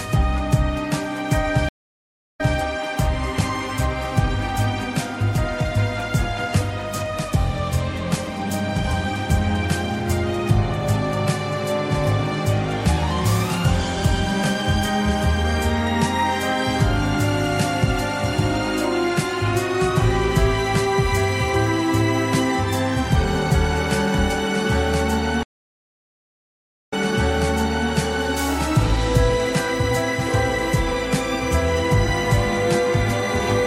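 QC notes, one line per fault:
1.69–2.57 s, stream reconnect: the connection dropped and the player restarted its decoder partway through the stream. The audio cuts to 704 ms of silence, then resumes 183 ms earlier than where it stopped, so a short stretch of sound is heard twice.
25.43–27.91 s, stream reconnect: a second, longer break forces another reconnection and a fresh decoder. The gap lasts 1.49 s, and the audio resumes 993 ms earlier, repeating nearly a full second of what was heard just before the dropout.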